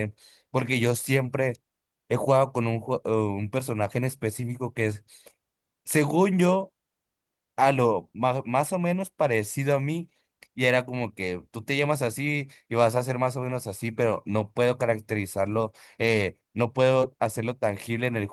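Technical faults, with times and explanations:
Nothing technical goes wrong anywhere in this speech recording, so there's nothing to flag here.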